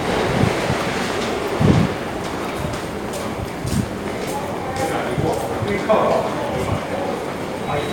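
Nothing stood out on listening to this recording of sounds.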